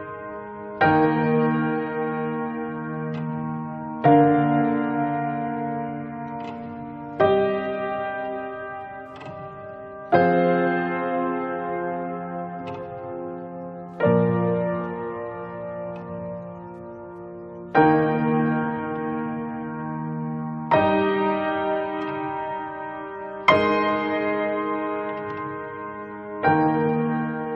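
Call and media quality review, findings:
No audible faults found.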